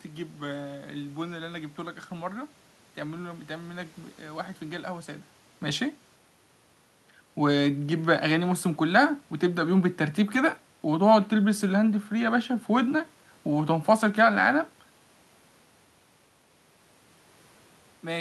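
No technical faults are audible anywhere in this recording.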